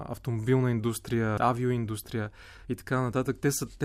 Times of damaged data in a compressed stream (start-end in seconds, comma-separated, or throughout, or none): 1.36